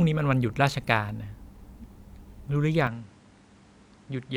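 At 2.87 s the speech abruptly loses its top end and stays that way to the end: nothing remains above about 10.5 kHz, so the sound turns slightly dull, with faint new background noise sitting roughly 35 dB below the speech. There is no gap at the change and little or no shift in loudness. This is likely an input switched to a poorer device, another microphone or a headset's call profile with a narrower band and its own noise.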